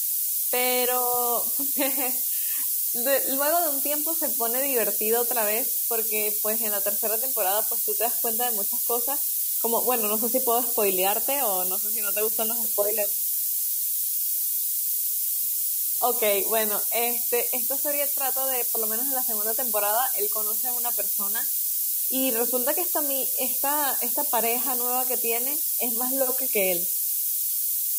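From start to finish, the speech is quantised to roughly 3 bits, with noise shaping feeding the rounding error upward in frequency. This low bit depth with noise shaping leaves a steady, thin hiss, roughly 10 dB from the speech level, that grows sharply toward the treble.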